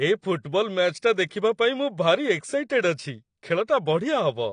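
The clip is speech, and it carries plainly audible codec damage throughout. Nothing is present above about 9.8 kHz, so the top of the spectrum sounds cut off and the speech comes across dull. Sibilants and sustained sounds have a smeared, warbling texture. This is likely AAC compression, with an AAC-LC encoder working at a low rate. The dullness and smearing fit a bitrate around 32 kbps, where the encoder lowers its cut-off and thins the spectrum to save data. Pre-echo appears twice. At 0.43 s a brief hiss of about 16 ms runs just ahead of a sharp onset. From 1.28 to 1.31 s a longer smear of about 26 ms precedes "ପାଇଁ ମୁଁ". In both places the attack fell late in a transform block. The quantisation noise meant for the loud part spread back into the quiet moment before it, so each onset sounds softened.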